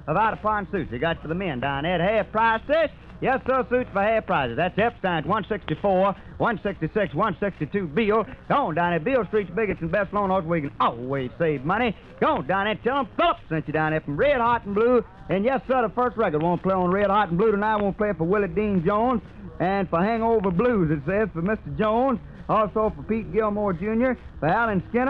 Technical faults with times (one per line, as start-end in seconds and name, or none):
none